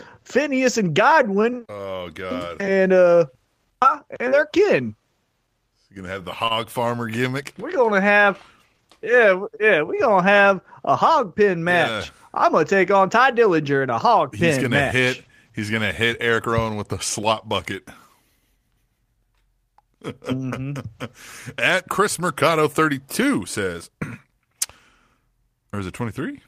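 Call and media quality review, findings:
Short stall from a late packet, 6.47–6.52 s, between "gonna have the" and "farmer gimmick". Jitter buffer underran while awaiting a late packet, so the receiver held the last sound for 26 ms, then resumed. Nothing lost; audible drag, latency up 26 ms.

Periodic USB or driver dropouts, 17.23–25.22 s, beginning after "with the". Recurring bus or driver block every 2.0 s; each time about 1 ms of audio is replaced by silence. Heard as about five evenly spaced ticks over the signal.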